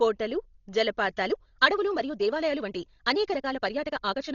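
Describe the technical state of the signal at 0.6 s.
At 0.6 s, as throughout the speech, the sound is dull and fluttery with nothing above 6.9 kHz, likely Dolby Digital compression at a very low bitrate near 32 kbps. Lines given no mantissa bits are dither-filled, showing as speckled noise below a flat spectrogram ceiling.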